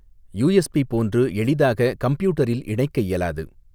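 No technical faults occur at any point in the speech, so there is nothing to describe in time order.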